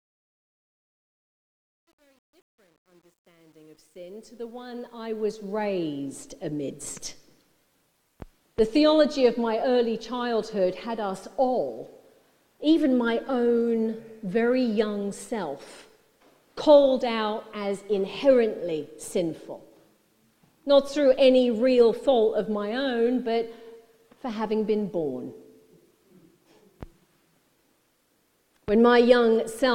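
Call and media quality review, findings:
Truncation distortion on fade-in, 0.0–5.65 s, worst 0.0–4.45 s. Gritty onset. The fade/gain stage requantises without dither, which fits a 10-bit path. Waveform: square staircase steps. Spectrogram: broadband grainy haze under the quiet start.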